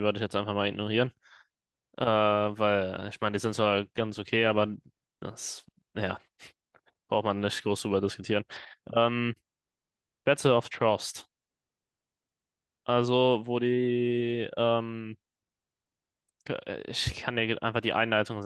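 A call bitrate drop hits this speech recording from 2.98 to 4.85 s, with the encoder squeezed from 32 to 18 kbps for about 1.8 s, making the audio coarser and rougher before it recovers.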